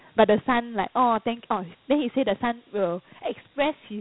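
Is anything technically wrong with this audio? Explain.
Yes. Throughout, Dialogic VOX ADPCM coding: coarse 4-bit step prediction, consistent with about 32 kbps, leaves a gritty hiss trailing the speech, with nothing above 3.9 kHz.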